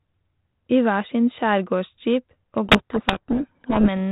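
At 2.66 s, right after "skjærgårdsjeep og", a codec payload misread sets in and lasts until 3.89 s. The receiver unpacks the G.726 code words with their bits in reversed order, so each sample's prediction difference is decoded wrongly and the speech sinks under harsh distortion. The underlying 32 kbit/s G.726 stream shows only light codec damage.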